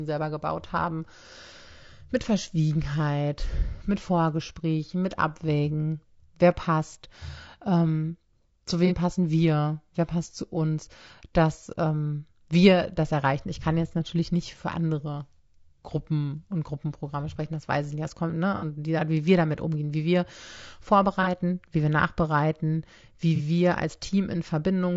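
Throughout this speech clip, low-delay AAC compression is plainly audible: the voice sounds rough and grainy, with noise between harmonics and a thin synthetic top, likely from AAC-ELD's short frames at a rate near 32 kbps. AAC frame loss with concealment occurs at 8.87, 18.56, 21.23 and 23.36 s. The decoder briefly rebuilds missing audio from the previous spectrum, producing smeared, noisy patches of about 30 ms, and about 60 ms at 18.56 s.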